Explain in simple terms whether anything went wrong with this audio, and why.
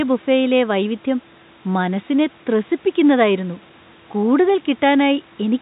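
Nothing went wrong here: the faint background noise of the room sits well underneath the speech, and the narrower, phone-like sound simply comes from the ordinary way telephone lines carry audio, which is working as it should.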